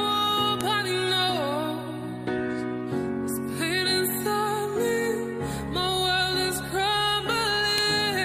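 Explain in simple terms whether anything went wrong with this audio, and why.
Two sharp, loud clicks stand out, one at 0.61 seconds and another at 7.78 seconds. This is a file header played as audio: separate pieces were joined without stripping each one's short header, so those bytes sound out as a snap.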